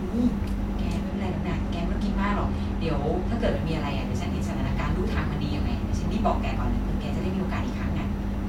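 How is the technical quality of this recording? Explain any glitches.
The speech has one fault. From 1.09 to 3.52 s there is channel delay (comb filtering): one channel lags by about a sample, a fraction of a millisecond, before the mono sum. That places the first notch near 20 kHz, so the top end sounds dulled rather than hollow. A spectrogram shows the uppermost band thinning over that span.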